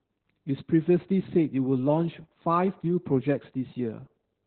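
Throughout the speech, the encoder runs Opus voice compression in its SILK linear-prediction mode, squeezed to narrowband at what sounds like a bitrate around 8 kbps. With so few bits it discards everything above about 4.3 kHz and quantises the excitation coarsely, frame by frame. Heavy damage follows: the voice comes out muffled and dull, with a hoarse, buzzy grain and a faintly robotic, telephone-like quality from start to finish.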